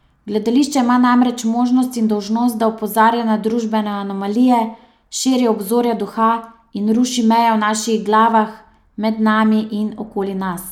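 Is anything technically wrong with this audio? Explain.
No, the speech signal carries no audible technical faults.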